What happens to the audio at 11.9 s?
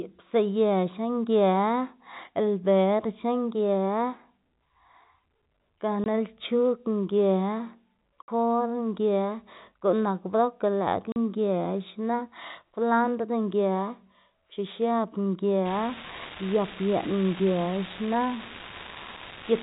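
Nothing goes wrong at 11.9 s: the speech carries on intact, with only the usual 4 kHz ceiling of G.711 telephone coding.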